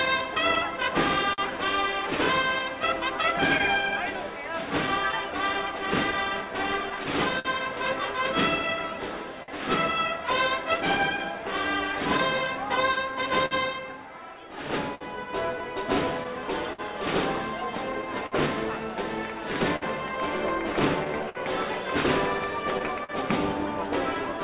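A steady buzz near 375 Hz runs through the whole clip, rising and falling with the level. This is a filter restarted on every block, which fits 128-sample blocks.

Small timing hiccups also recur at uneven intervals throughout. This is clock drift between sender and receiver, with the sender running roughly 4% slow, so the receiver keeps stretching and repeating pieces.

From 0.05 to 23.12 s, about thirty brief ticks and smears appear, none longer than about 50 ms. These are scattered short gaps, each patched by continuing the last sound, with the audio already band-limited to 4 kHz by the G.711 call path.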